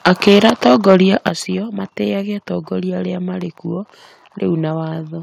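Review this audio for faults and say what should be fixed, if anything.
Microphone overload at 0.06 to 0.96 s and 1.26 to 1.29 s adds a harsh crackle, likely from peaks driven about 9 dB and 4 dB past the converter's limit. On the waveform this shows as flat-topped peaks, and on the spectrogram as broadband splatter.

The microphone volume stepped down abruptly, by about 4 dB at 0.28 s and about 8 dB at 1.29 s, likely the call software reacting to that clipping. On the waveform the whole envelope drops at once.

To prevent both, set the microphone input gain lower before recording so peaks stay well below full scale and the software has no reason to cut it.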